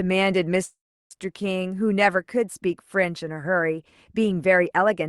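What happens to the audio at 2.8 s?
Nothing goes wrong at 2.8 s; the speech continues intact through the call path, with its top end limited to about 12 kHz.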